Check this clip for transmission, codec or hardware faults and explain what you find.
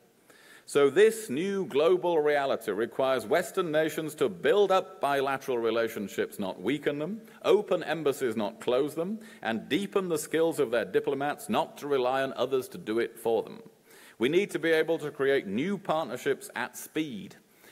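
No faults can be heard anywhere in the clip. There is nothing in the audio that calls for an explanation.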